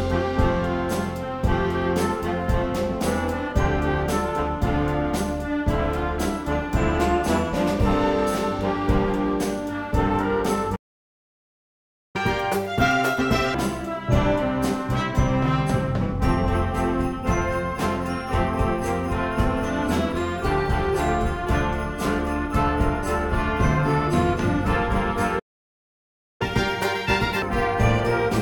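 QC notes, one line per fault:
10.75–12.16 s, playback stall: the player most likely ran dry of buffered data or had its output thread blocked, so nothing reached the output for about 1.4 s. The sound cuts off mid-flow into silence rather than fading.
12.16–13.54 s, catch-up at higher speed: to recover the lost time, the player resamples its backlog at 2× speed. Tempo doubles and pitch jumps up by around ten semitones before snapping back to normal.
25.39–26.42 s, playback stall: again the data supply or output thread was likely starved or blocked, leaving a gap of about 1.0 s. The audio halts abruptly into silence.
26.42–27.42 s, catch-up at higher speed: the queued audio is again rushed out at 2× through resampling. The sound runs doubled in speed and raised around ten semitones for about a second, then returns to normal.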